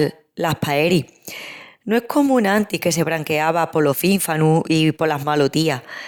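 Nothing in this recording sounds off to me: no dropouts, glitches or other technical faults come through anywhere along the way.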